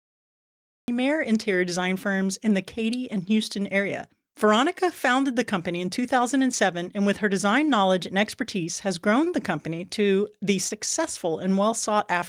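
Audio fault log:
0.00–0.88 s, cut-off start: capture began after the speaker had already started, so the audio opens on digital silence and then jumps straight into speech at 0.88 s. The first sound has no natural onset or fade-in, and the entry is abrupt.
9.24–9.28 s, short stall from a late packet: one packet arrived about 24 ms late and the jitter buffer ran dry. The receiver held the last sound for roughly 24 ms, then resumed where it left off, so nothing is lost but that moment drags slightly.
10.68–10.72 s, short concealed packet loss: about 20 ms of audio never reached the decoder in time. The receiver covered the gap with roughly 17 ms synthesised from the preceding speech, then blended back. This leaves a brief smear or wobble, and a short consonant there may be missing.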